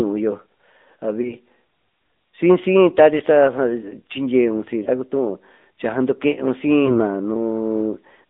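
Speech heard through the AMR narrowband mobile codec: a spectrogram shows nothing outside roughly 200 Hz to 3.7 kHz. The sound is plainly buzzy and synthetic, which fits a mid-range AMR-NB bitrate near 10.2 kbps. Lost AMR speech frames cause brief dips or warbles at 1.22–1.35, 3.18–3.22, 4.84–4.89 and 6.86–7.01 s. Each appears as a small smeared notch in the waveform's envelope, where the decoder stretched the previous frame while its level fell.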